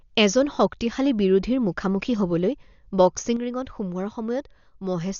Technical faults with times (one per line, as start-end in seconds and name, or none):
0.00-5.19 Dolby Digital compression
3.36-5.19 one channel drops out